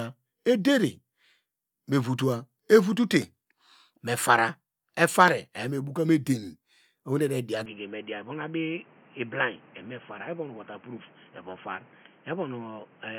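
At 7.66 s the recording system likely switched its input to a poorer device, such as a second microphone or a headset running its narrow call profile. From there to the end, the speech loses everything above 3.3 kHz and turns dull and boxy, with new background noise sitting around 30 dB under it. The cut happens with no gap, and the loudness stays about the same.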